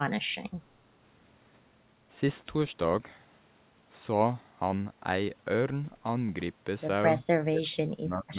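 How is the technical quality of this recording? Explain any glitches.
The recording has one clear glitch, in its final second. From 7.42 s to 8.38 s the speech is hit by what is most likely speech suppressed in double talk. The echo canceller, faced with both ends talking at once, apparently could not tell the near talker apart from loudspeaker echo and pulled the level down. The speech drops sharply, by around 30 dB at its deepest, and breaks up in pieces totalling roughly 0.7 s. Throughout, the band stops at 4 kHz, which fits a narrowband telephone codec on the call path.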